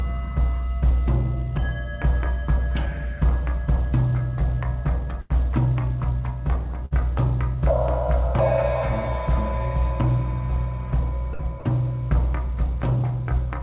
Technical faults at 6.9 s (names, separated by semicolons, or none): burst of packet loss